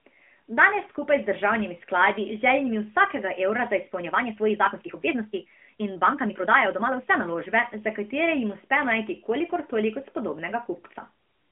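From 3.97 to 7.23 s the speech abruptly runs 1.42 times faster at unchanged pitch, sounding rushed. This is a time-stretched section, likely from software dropping short pieces. A spectrogram shows steady harmonic spacing with crowded syllables, and the waveform shows tightly packed envelopes with small splice jumps.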